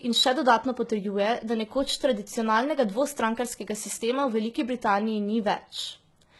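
The speech sounds like it's been through heavy HE-AAC compression for the whole clip. The rebuilt treble goes gritty and lispy on s sounds, nothing above 11.8 kHz, likely a very low bitrate around 16 kbps.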